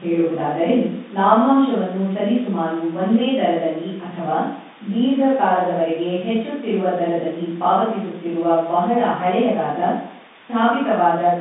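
Speech over an ordinary G.711 A-law telephone path, band-limited to roughly 150 Hz to 3.7 kHz as a landline should be, with nothing wrong to report.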